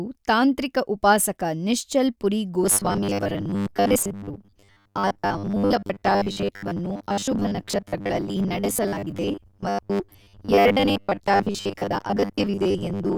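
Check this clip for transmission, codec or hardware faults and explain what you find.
Yes, the speech has one fault. From 2.64 s onward there is robotic sound from repeated short buffers: a 10 ms block, likely replayed over skipped audio, creates a metallic 100 Hz buzz, visible as rigid 100 Hz spectrogram stripes.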